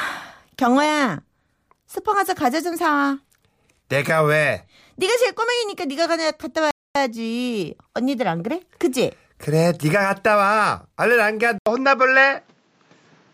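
A speech recording with two separate problems. At 6.71 s the sound stops dead for about 245 ms, until 6.95 s, and then carries on. This is a playback stall, most likely the player running short of data or having its thread held up. What separates it from a packet-loss dropout is the single clean silence lasting a quarter of a second, rather than a brief glitch or a burst of concealment artefacts. From 11.58 s to the end the tone changes abruptly after a short gap of about 80 ms. The input switched to a poorer device. The band narrows after that point, and a new background hiss sits roughly 40 dB below the speech, while the overall level stays about the same. The short silence at the join and the fresh noise floor point to a different device taking over rather than a codec lowering its bandwidth. That is the likely cause.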